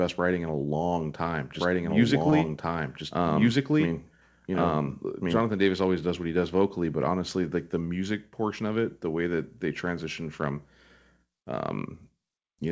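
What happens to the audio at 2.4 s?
At 2.4 s the sound is heard twice, with a second, equally loud copy trailing about one and a half seconds behind. This is a doubled audio track that starts abruptly after "in a long time" and runs from 1.55 s to 5.45 s. It is likely caused by a second, slower capture path. Just before that, from 2.30 to 2.34 s, a sound is briefly held too long. This is a short stall from a late packet: the receiver stretched about 19 ms of audio to cover it, so nothing is lost, but playback runs that much later afterwards.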